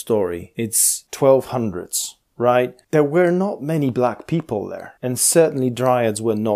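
Nothing in the speech recording points to a technical fault: the signal holds steady, with no audible breaks, distortion or unwanted artefacts at any point.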